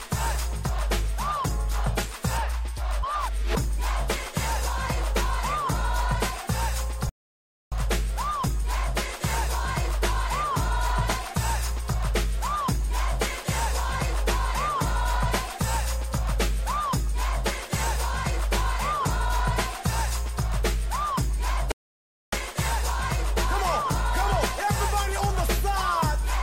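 Two rebuffering stalls interrupt the audio, at 7.09 to 7.72 s and 21.72 to 22.33 s, each about 0.6 s of silence. The player ran dry and waited for data, so the sound resumes exactly where it stopped, unlike a dropout, where material goes missing.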